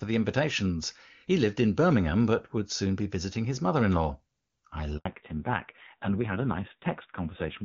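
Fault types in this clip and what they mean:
Handover gap: The call switched networks and no frames arrived during it. Right after "mother in law I", the speech drops to silence for 80 ms.
Fallback to narrowband: From 5.05 s to the end, nothing above 4 kHz passes. The voice turns duller and rougher, which fits a low narrowband rate near 5.9 kbit/s.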